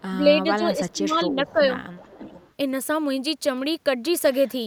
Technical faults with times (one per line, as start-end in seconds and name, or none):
0.09-1.78 speech suppressed in double talk
1.48-1.52 echo leak
1.93-2.51 echo leak